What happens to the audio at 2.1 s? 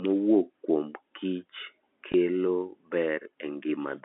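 Around 2.12 to 2.14 s there's a brief packet-loss dropout with the last packet repeated. About 20 ms of audio went missing, which fits a single 20 ms packet, and the receiver filled the gap by replaying the chunk it had just played. That single replay comes through as a small blip, too short to build into a buzz. It sits within the narrow telephone-band G.711 sound.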